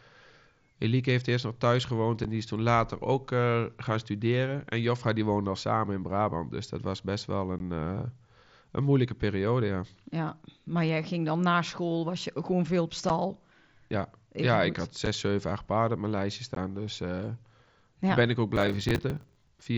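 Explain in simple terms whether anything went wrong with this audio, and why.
Two things went wrong. The first is unconcealed Bluetooth headset packet loss, heard as five tiny holes at 2.24, 7.59, 13.09, 15.06 and 16.55 seconds. Each is a sharp dropout lasting 7.5 ms, or 15 ms at 7.59 and 16.55, which fits one or two lost packets between headset and phone. Nothing fills the gap, so the sound simply stops and restarts with hard edges. These are isolated, well-spaced blips rather than a steady roughness, and the wideband headset codec carrying the speech doesn't smear them over.

The second is processor overload crackle, from 18.56 to 19.66 seconds. Here the device couldn't finish its small audio chunks, each around 10 ms, in time, and it missed dozens of them. Each miss replayed a scrap of old audio, so the end of the clip gets a gritty, tearing crackle for about a second. Unlike the Bluetooth holes, this is one dense, continuous burst with no silent gaps, and it stops as soon as the overload passes.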